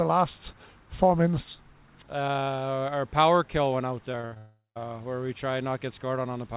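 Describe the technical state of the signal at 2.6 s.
At 2.6 s the signal is intact, with no dropout, click or distortion, only the narrow telephone-band sound of a G.711 mu-law call path that leaves nothing above 4 kHz.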